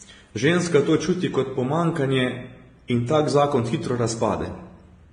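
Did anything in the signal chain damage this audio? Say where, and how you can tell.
Yes, at the codec stage: the speech carries two layers of smeared, swirly artefacts throughout, with nothing above 18.3 kHz, unlike one codec's single texture, likely transcoding between lossy codecs.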